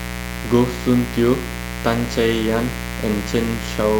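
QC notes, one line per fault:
Throughout: mains buzz. A steady, raspy buzz sits under the speech for the whole clip, fairly loud against it. It is built on 60 Hz, from sharp switching spikes arriving twice per mains cycle. A dimmer, rectifier or unshielded cable lets them in. Because the spikes are so abrupt, their harmonics climb well into the kilohertz range. That spread of upper harmonics gives the buzz its edge, rather than a smooth low hum.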